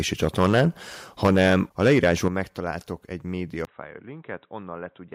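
From 0.23 to 0.66 s and again from 1.24 to 2.28 s the loudest syllables crackle harshly, most likely microphone overload, with peaks roughly 9 and 11 dB past the converter's limit and flattened. The level drops abruptly at 1.27 s, by about 3 dB, and at 2.28 s, by about 7 dB, likely the microphone volume stepped down by the call software. At 3.65 s a brief 20 ms gap gives way to a dull, boxy sound about 10 dB quieter, with a faint new noise floor, likely an input switched to a poorer device.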